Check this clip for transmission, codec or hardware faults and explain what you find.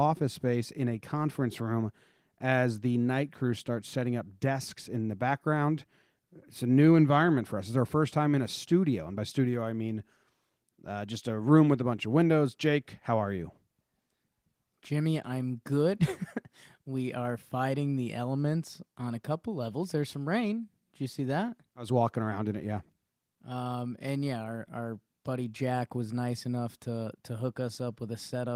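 No faults are audible in this recording.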